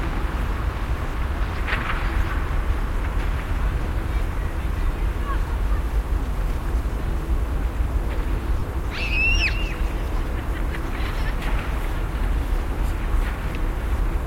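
At 3.84 s, lost LE Audio frames leave a brief 7.5 ms patch where the decoder repeats the last spectrum with random signs, a tiny noisy smear. From 8.59 to 8.63 s a 30 ms gap, consistent with four lost frames, smears and fades, appearing on a spectrogram as blurred, decaying bands.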